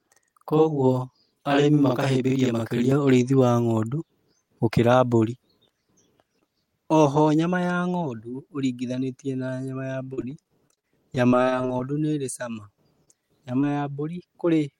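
Speech, opening with a channel delay (doubling) from 0 to 2.92 s: one channel runs about 46 ms late, which fits a 2048-sample buffer, and the mono sum produces a distinct doubled slap. Between 10.03 and 11.81 s, repeated packet loss gives a choppy, robotic stretch, with gaps up to 40 ms patched by extending prior sound, covering roughly a fifth of the span. Short concealed packet loss then appears at 13.05 to 13.09 s and 13.61 to 13.64 s, each a roughly 20 ms hole filled from preceding audio, heard as a brief smear.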